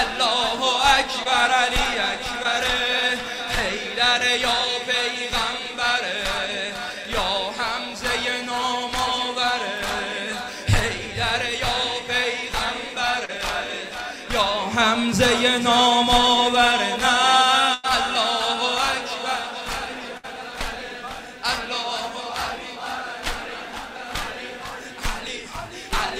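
At 1.23 to 1.27 s, 2.43 to 2.46 s and 13.25 to 13.30 s there is short concealed packet loss: 20, 20 and 40 ms of audio failed to arrive, and the receiver briefly extended the preceding sound before blending back. Each is a quick smear or wobble, which sets them apart from the longer gaps later.

At 17.74 to 17.85 s and 20.17 to 20.25 s comes a burst of packet loss, 100 and 60 ms missing. Here the continued sound fades into a held buzz or hiss, and the audio resumes further on with that stretch gone.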